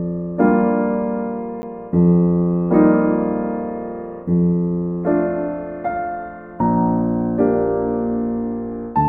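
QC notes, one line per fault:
1.62 s, block of digital silence: the music drops out for about 10 ms and returns with no fade, and a gap this short is heard as a tick or dip rather than as silence. Such a short hole fits an output buffer that went unfilled in time.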